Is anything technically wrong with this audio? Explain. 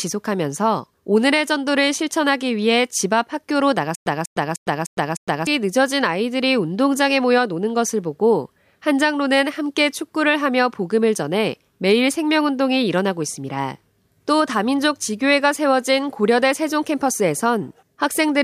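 Yes. From 3.95 to 5.47 s there is a stutter with silent gaps. A 194 ms burst repeats five times, each followed by about 110 ms of silence, on a steady 304 ms cycle. The likely cause is a stalled stream replaying its last fragment at each retry, so the speech meant for that span is lost. The waveform shows identical blocks between flat gaps, and the spectrogram shows one pattern stamped repeatedly with blank columns between.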